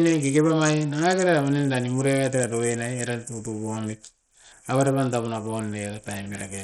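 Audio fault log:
throughout, Bluetooth SBC compression: the speech sounds gritty and coarse, with flickering treble and nothing above 13.9 kHz. This is likely SBC with a small bit pool, fitting about 64 kbps, that starves the top sub-bands and crudely quantises the rest, adding noise and aliasing.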